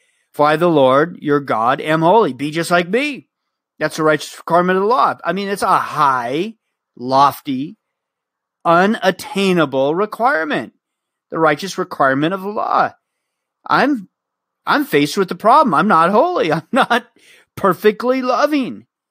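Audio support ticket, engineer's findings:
Engineer's findings: no audible fault found in the speech audio.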